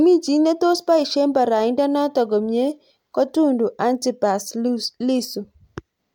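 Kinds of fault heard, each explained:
Nothing stood out on listening to this speech recording.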